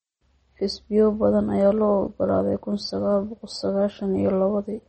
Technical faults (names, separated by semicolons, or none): MP3 compression